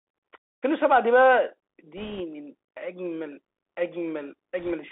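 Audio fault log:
Throughout, Bluetooth CVSD headset codec: the speech is confined to roughly 300 Hz to 3.6 kHz. Scratchy sibilants, granular hiss and overload distortion suggest a one-bit 64 kbps delta coder.
1.97–2.21 s and 4.59–4.73 s, bit errors on a Bluetooth voice link: brief rushing crackle rides on the speech. Flipped bits, around 2 percent, cause small steps that fade quickly, so there are no sharp clicks.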